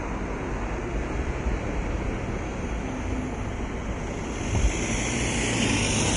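From start to finish the sound is hissy and grainy, with a noisy sheen in the treble, rough edges on steady tones and softened attacks, and nothing at all above about 10.6 kHz. The likely cause is heavy Vorbis compression, consistent with a low bitrate of around 32 kbps. The encoder cut the top band away and quantised the remaining high-frequency detail so coarsely that it became noise of similar energy.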